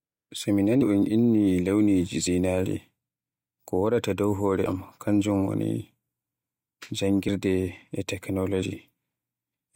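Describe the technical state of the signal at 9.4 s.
The signal at 9.4 s is intact, with no audible fault at that point in the speech.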